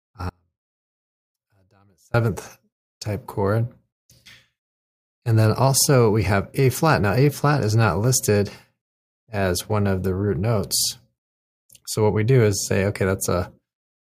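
At 0.30 s the speech cuts out abruptly and stays gone until 2.14 s, an audio dropout to a faint residue lasting about 1.85 s. The gap isn't silent: a faint trace of the signal remains, roughly 35 dB below its normal level. The likely cause is the wanted feed being lost while the path after the break stayed live. Unlike a natural pause or a fade, the speech stops and returns instantly, mid-flow.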